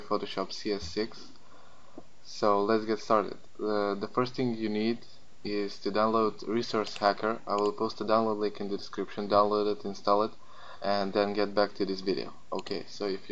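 No technical faults can be heard anywhere in the clip.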